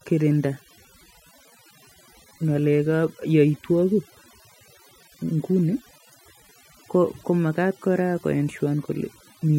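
A speech recording with overdone noise removal throughout: the background drops and breaks up into twinkling specks. On a spectrogram, isolated flickering dots appear between phrases.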